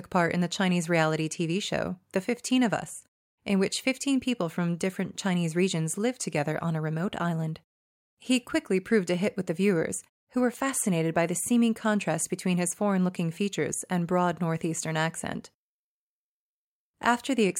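The speech signal carries no technical faults, and the gating that drops the background to silence between phrases brings the sound back in time for each one.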